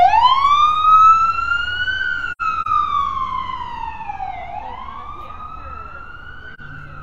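Between 2.32 and 2.67 s the sound drops out in soft-edged gaps, about 128 ms of silence scattered across roughly a third of a second, the longest lasting around a tenth of a second. At 6.54 s a single shorter hole of about 43 ms fades out and back. This is AAC frame loss with muting: the decoder zeroes the spectrum of missing frames, and the overlapping windows taper each gap's edges. Hole lengths fit whole frames of about 43 ms each.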